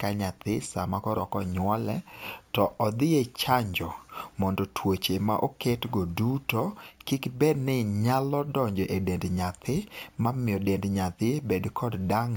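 Throughout the speech there is imaging from sample-and-hold upsampling. Each sample was simply repeated, with no smoothing filter. This fits 16 kHz audio raised to 48 kHz. A mirrored copy fills 8 to 16 kHz at about 21 dB down. It adds a bright metallic fizz.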